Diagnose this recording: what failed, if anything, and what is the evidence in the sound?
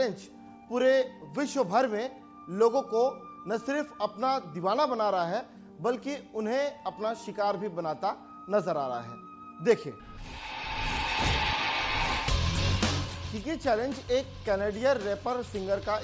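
Nothing in the recording points to a failure at any stage. No break, distortion or other disturbance stands out anywhere in the sound.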